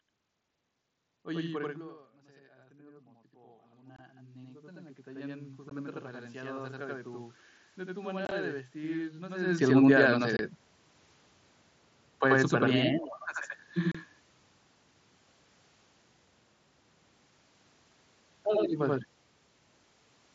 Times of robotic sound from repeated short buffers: none

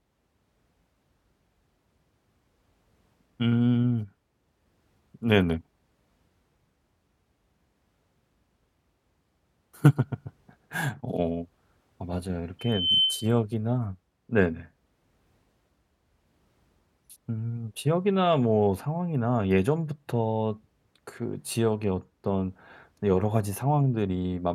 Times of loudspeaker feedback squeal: 12.59-13.40

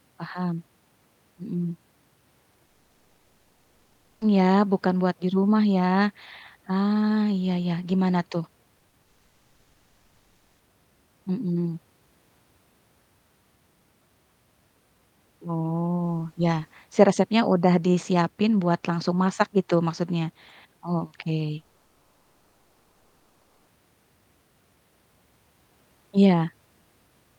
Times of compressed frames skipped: none

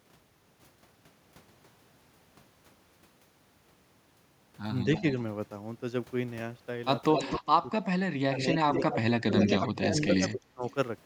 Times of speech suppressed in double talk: 7.38-7.71, 8.26-10.65

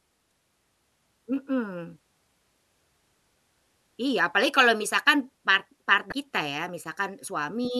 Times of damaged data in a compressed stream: 0.29-0.32, 6.09-6.12

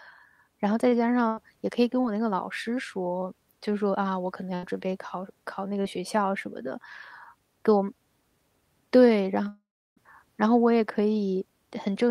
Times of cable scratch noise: none

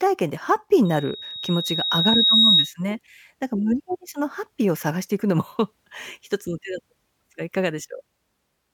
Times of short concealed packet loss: none

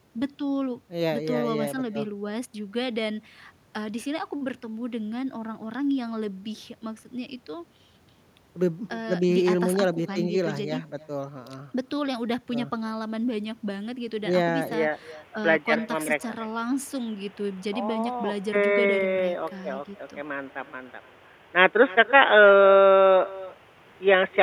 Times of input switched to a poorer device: 14.73-24.42

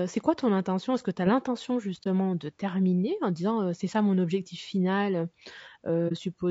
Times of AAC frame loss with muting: 2.03-2.07, 6.08-6.12

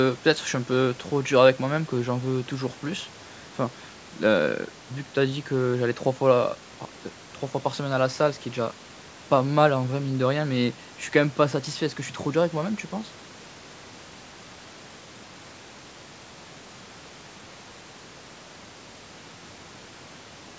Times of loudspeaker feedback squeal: none

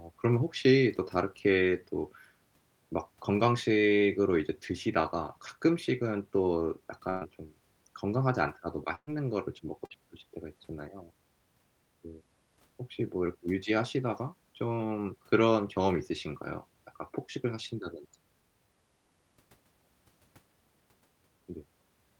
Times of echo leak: none

